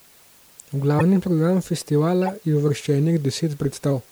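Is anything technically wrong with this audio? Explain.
Yes, there are two kinds of fault. Two short glitches come from a corrupt frame being decoded. At 0.99 to 1.02 s there is a sharp, loud glitch lasting about 30 ms, a length that points to a single damaged frame. At 2.23 to 2.29 s a quieter glitch runs for about 60 ms, which fits roughly three frames in a row. In each case flipped bits inside the compressed data made the decoder apply wrong gains or misread codes, so energy landed at frequencies unrelated to the speech for as long as the damaged frames lasted.

From 2.82 to 3.92 s the speech drops in pitch by about 106 cents, a little over a semitone, and slows by 5.95%. The speech sounds clearly flat and dragged for about a second and then snaps back to normal. This is likely a drift correction step: software keeping two clocks aligned changed the playback rate in a single jump to rebalance its buffer, so speed and pitch moved together and then returned at once.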